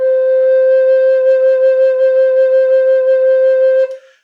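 No technical faults are audible.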